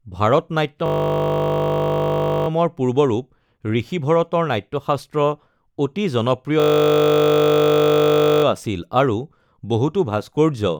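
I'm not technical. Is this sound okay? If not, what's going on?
No. The speech twice turns into a steady buzz, from 0.86 to 2.48 s and from 6.6 to 8.44 s. This is a system hang loop: the computer briefly froze, and the sound hardware kept replaying the last tiny slice of audio it held, a 20 ms piece repeated over and over. Fifty repeats a second is heard as a 50 Hz buzz rather than a stutter. Little or no speech seems to be missing afterward.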